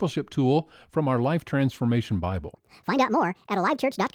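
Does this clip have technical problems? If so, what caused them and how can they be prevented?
Yes. From 2.54 s to the end, a section at the wrong speed runs 1.57 times fast, raising the speech about seven semitones, likely from a mismatched clock. On a spectrogram the harmonics step abruptly upward, and the waveform looks squeezed in time. Matching sample rates between editing and playback prevents it.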